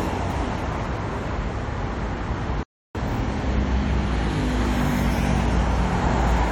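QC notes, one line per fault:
0.34 s and 6.00–6.02 s, compressed frames skipped: The sound jumps forward twice. At 0.34 s it loses about five 23.2 ms frames, roughly a tenth of a second. At 6.00 s it loses about three, near 70 ms.
2.63–2.95 s, playback stall: The sound stops mid-flow for about 315 ms and then carries on. This is likely the player running short of data or its thread being blocked.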